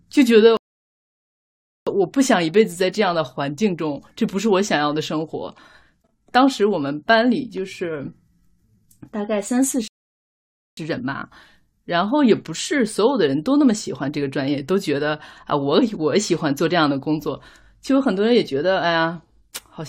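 A rebuffering stall hits at 0.57 s and holds the speech in silence until 1.87 s, adding about 1.3 s; a second stall runs from 9.88 to 10.77 s, adding roughly 0.9 s. Each time, playback outran the downloaded audio and the player waited for more data. The speech stops dead mid-flow, then picks up at the exact point it left off, so nothing is skipped and the only damage is the inserted gap.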